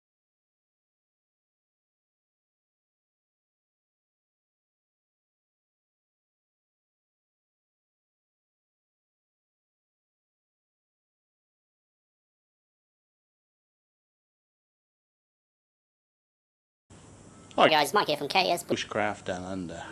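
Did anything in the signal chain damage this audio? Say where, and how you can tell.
Yes. From 17.69 to 18.72 s there's a wrong sample rate at playback: the sound runs 1.45 times fast and about 6.5 semitones high, which fits 22 kHz material played at 32 kHz.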